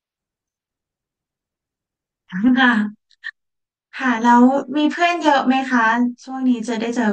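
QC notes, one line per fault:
2.48 s to the end: channel delay (comb filtering), one side lagging around 20 ms and summed to mono, so evenly spaced notches starting near 30 Hz leave the speech sounding rough and slightly doubled.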